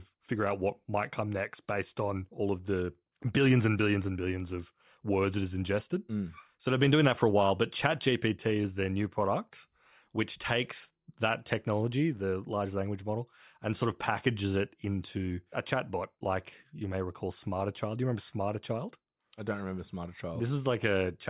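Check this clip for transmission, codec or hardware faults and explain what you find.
Listening through the speech here, nothing jumps out as a fault at all, so there's nothing to report.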